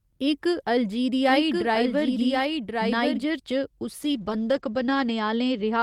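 From the start until 3.24 s, a second copy of the speech, about 5 dB quieter, runs about a second behind the first, carrying no decay or room colour. This doubled audio track is likely a second capture through a slower path being mixed in alongside the original.

From 4.02 s to the end, the speech turns rough and muffled as the high frequencies drop away. This is a call bitrate drop: the encoder was pushed from 32 kbps down to 12 kbps, with its band narrowing from 20 kHz to 8 kHz, and it stayed at the lowest rate for 1.1 s.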